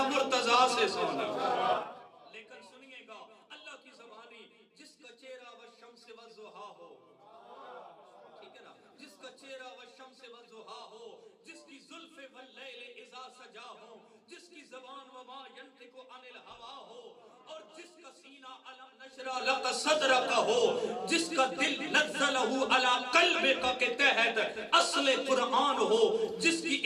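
Zipper noise at 1.71–2.09 s and 19.03–19.54 s: a roughly 25 dB cut, then restore, moves in unsmoothed 3 dB steps, ticking audibly.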